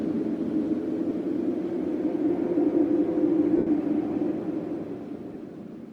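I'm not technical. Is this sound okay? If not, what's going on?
No. There are lost LE Audio frames at 1.09 s, 3.57 to 3.67 s, and 5.34 s. Pieces of the wireless stream went missing, and the decoder filled each gap with a blurry copy of the last sound, briefly at 1.09 and 5.34 s and fading over the longer 90 ms gap.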